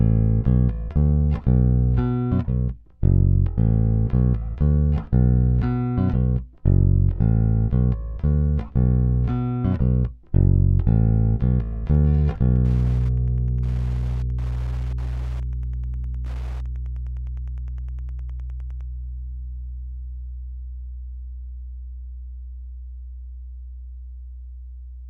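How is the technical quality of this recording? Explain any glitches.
The recording has one technical fault, Wi-Fi interference, running from 11.93 s to 18.88 s. In that stretch a steady ticking sits beneath the sound at about ten ticks per second, roughly 30 dB below the signal. It comes from a nearby Wi-Fi radio whose beacon fires every 102.4 ms and is rectified by the audio circuit, turning each radio pulse into an audible click. On a spectrogram it shows as evenly spaced thin vertical lines across a wide band of frequencies, and on the waveform as small, regularly repeating spikes.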